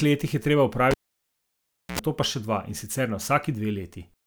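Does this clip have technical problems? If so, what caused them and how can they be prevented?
Yes. Just after "letih je treba", at 0.91 s, a pop marks a cable pulled and plugged in: about 1.03 s of near silence, then a 76 ms burst of 60 Hz mains buzz as the tip touches, and a second pop at 1.99 s before "nato pa še". Keep cables secured and never repatch a live line.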